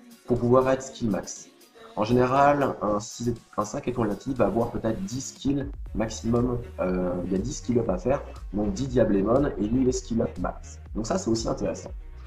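No technical faults can be heard anywhere in the audio, and the signal holds steady throughout without any disturbance to its path.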